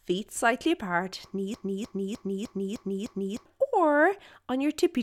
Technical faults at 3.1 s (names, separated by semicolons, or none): broken-record loop